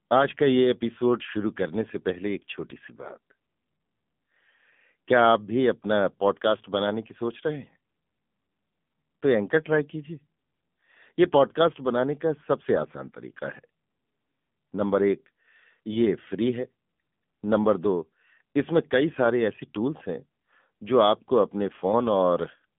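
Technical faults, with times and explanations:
Throughout, AMR narrowband mobile codec: the speech has the boxed-in sound of a mobile call, confined to roughly 150 Hz to 3.5 kHz with nothing above 3.6 kHz. The coding damage is plainly audible as a buzzy, synthetic edge, which fits a low AMR-NB mode around 7.4 kbps, where a vocal-tract model and a few excitation pulses per 5 ms rebuild the voice. On a spectrogram, energy stops at a hard ceiling near 3.6 kHz, and harmonics look smeared and blocky frame by frame.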